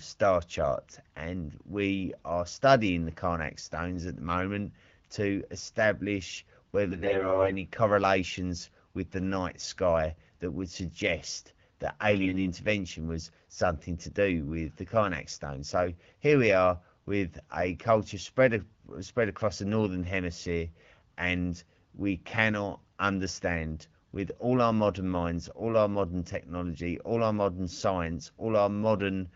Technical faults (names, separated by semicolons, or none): AMR bit errors